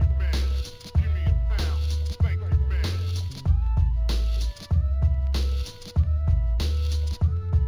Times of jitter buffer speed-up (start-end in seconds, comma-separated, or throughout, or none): none